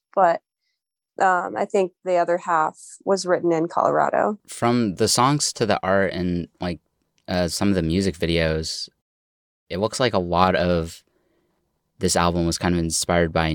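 No technical faults can be heard anywhere in the speech recording; the signal stays continuous and steady throughout.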